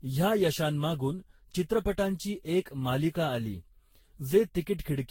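Throughout the speech the sound is swirly, smeared and hollow, attacks blur, and nothing reaches above 16.6 kHz. Unlike a single low-bitrate encode, the damage points to likely generation loss: around ten lossy passes, each on a shifted frame grid, compounding noise and spectral holes.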